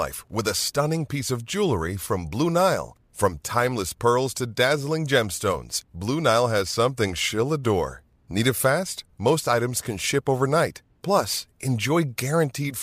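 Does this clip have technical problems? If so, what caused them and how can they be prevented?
No, this clip has no technical problems, so there is nothing to trace or prevent.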